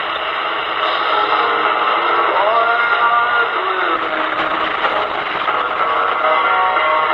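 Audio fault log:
3.98–7.14 s, call bitrate drop: the call's bandwidth estimate fell, so the encoder was told to spend far fewer bits and began coding more coarsely. The top end narrows from 20 kHz to 12 kHz, dulling the sound, and the worst stretch lasts about 1.21 s with a rough, watery texture, which fits a fall from around 64 kbps to about 12 kbps. It does not recover before the clip ends.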